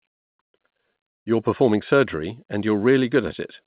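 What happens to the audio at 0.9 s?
At 0.9 s the speech simply carries on intact, with no dropout, glitch or distortion, only the band-limited sound of the WebRTC call path, which passes nothing above 4 kHz.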